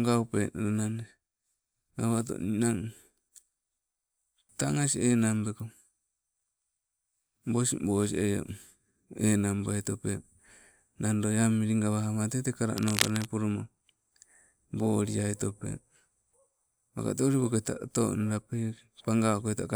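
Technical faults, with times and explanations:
12.77 to 13.26 s, cable scratch noise: dense, uneven scratching bursts almost as loud as the speech, likely from a worn cable or connector being moved.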